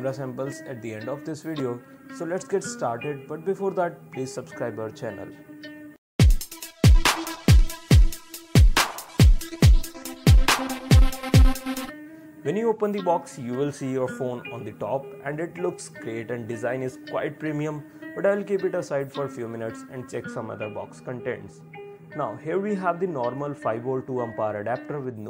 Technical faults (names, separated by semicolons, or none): de-emphasis applied wrongly